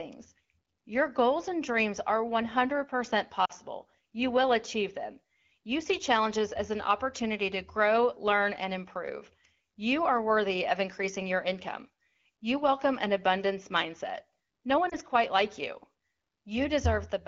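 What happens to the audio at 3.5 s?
At 3.45 to 3.51 s there are lost AMR speech frames. About 40 ms of speech failed its checksum after radio errors, which fits two consecutive 20 ms frames. The AMR-WB decoder, running at 12.65 kbit/s, filled the gap by repeating the last good pitch and vocal tract settings at falling gain. This is heard as a short drop to near silence within the two frames, and the speech returns weak or rough for a moment just afterwards.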